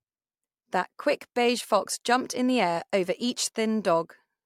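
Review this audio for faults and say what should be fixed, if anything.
Nothing needs fixing here: the speech signal has no detectable technical faults anywhere in the recording.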